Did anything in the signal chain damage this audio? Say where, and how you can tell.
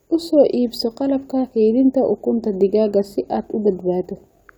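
No, nothing in the chain has audibly damaged this speech recording at any stage.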